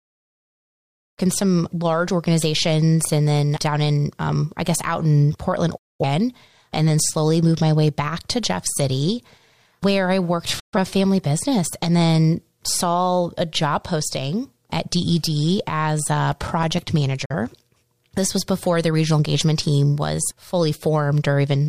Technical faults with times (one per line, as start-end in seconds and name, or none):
5.77-6.04 digital broadcast dropout
10.59-10.78 digital broadcast dropout
16.01-16.94 CD scratch ticks
17.25-17.34 digital broadcast dropout